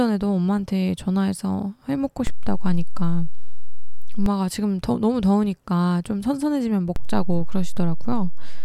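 A DC step at 2.27 s shifts the zero line of this speech clip by about -14 dBFS. The offset holds until 4.26 s, then snaps back, giving a low thump at each edge while the speech carries on unchanged. A second DC step at 6.96 s adds an offset of about -16 dBFS that holds to the end, with a single thump at its onset. Both point to a converter recalibrating or an offset-carrying input being switched in.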